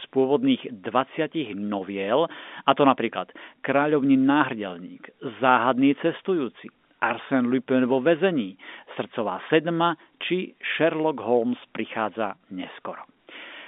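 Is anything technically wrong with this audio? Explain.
No, nothing's wrong here; it's speech carried over ordinary G.711 telephone coding, so it sits in the usual phone-line band of roughly 200 Hz to 3.6 kHz, which is just how that path is meant to sound.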